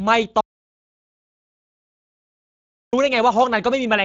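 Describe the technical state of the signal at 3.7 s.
At 3.7 s you're still hearing the Speex codec damage that runs through the whole clip. The speech has a hoarse, noisy grain because this CELP coder hasn't enough bits to model the excitation cleanly, so the buzz underneath the voice gets approximated rather than reproduced. Anything up above 8 kHz is a shaped noise fill rather than real detail. It's plainly audible, and the degree fits a setting of around 20 kbps.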